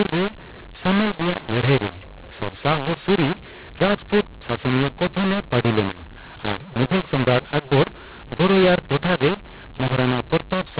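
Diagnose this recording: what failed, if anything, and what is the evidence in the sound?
A mu-law and A-law mix-up runs through the whole speech recording, at the codec decode stage. Bytes written as mu-law are read back as A-law, so levels are scrambled: loud passages grow harsh and distorted, and the quiet pauses fill with noise instead of falling to silence.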